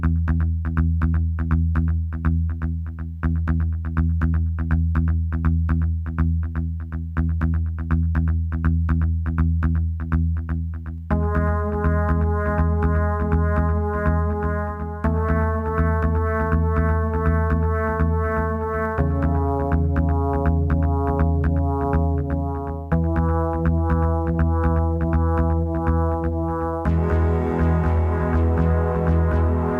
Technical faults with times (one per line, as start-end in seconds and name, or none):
0.00-29.80 sample clock jitter